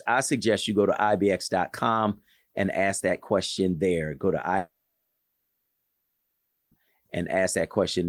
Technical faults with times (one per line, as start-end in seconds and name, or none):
4.57-6.76 long network dropout